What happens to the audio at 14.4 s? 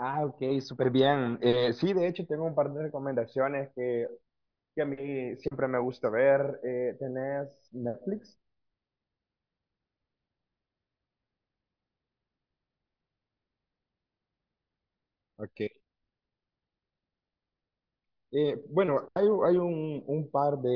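Nothing goes wrong at 14.4 s; the speech continues intact through that moment with no dropout, click or distortion.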